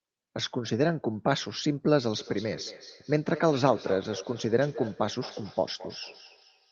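From 2.19 s to the end, a feedback echo between two devices sets in: a nearby device replays the call, and this microphone recaptures it outside its echo canceller's reach. Speech returns roughly every fifth of a second, thin and ringing, peaking about 15 dB below the direct sound.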